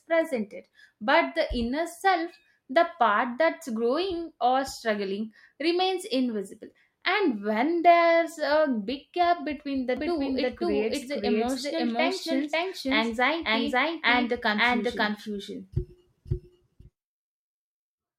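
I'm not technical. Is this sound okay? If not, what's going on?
No. From 9.97 s to the end, the speech was likely captured twice, a doubled audio track, so an equally loud copy repeats about half a second later.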